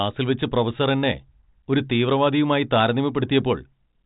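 Nothing here counts as a fault: the speech comes through a G.726 ADPCM path at 40 kbit/s, which leaves at most a faint trace of coding noise, and the band stops at about 3.8 kHz, just as telephone-grade audio should.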